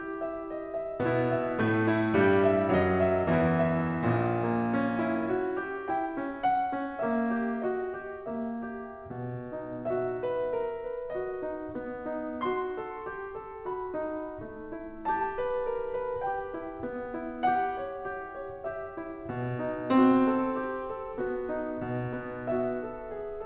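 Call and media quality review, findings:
No faults found in the music.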